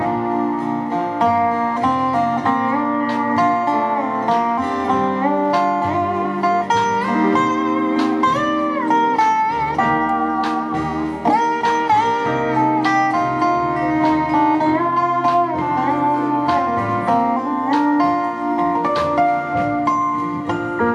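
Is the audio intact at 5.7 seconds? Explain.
Yes, the audio at 5.7 seconds is intact, with no dropout, click, distortion or other fault at that moment.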